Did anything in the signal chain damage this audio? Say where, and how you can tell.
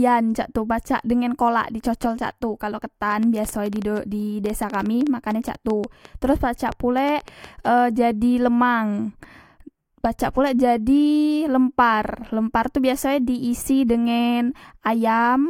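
Yes. From 3.12 to 7.67 s, between "cocol cak tu kalok" and "jadi e lemang", a train of clicks ticks over the speech and its pauses, about 6.6 per second at uneven spacing, roughly thirty in all, peaking about 5 dB above the signal. Likely interference in the analogue wiring, injecting similar pulses.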